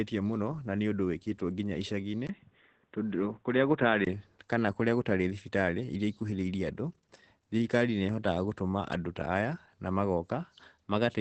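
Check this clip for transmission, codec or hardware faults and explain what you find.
Two faults are present: low-bitrate Opus voice compression throughout the speech, and a brief drop to a narrower-band input in the early seconds.

Opus voice compression runs the whole clip at 12 kbps in SILK mode, wideband, with 20 ms frames. The linear-prediction coder models the excitation coarsely at this rate, so the speech sounds plainly muffled, hoarse and slightly robotic. A spectrogram shows a hard ceiling at 8 kHz and blurred harmonics.

From 2.27 to 4.07 s, right after "ũndúũwĩkĩtwo nginya", the sound turns dull and boxy, most likely because the input switched to a poorer device. A 20 ms gap at 2.27 s marks the switch, and loudness stays about the same. On a spectrogram everything above 3.8 kHz vanishes for that stretch, leaving a faint new noise floor far beneath the speech.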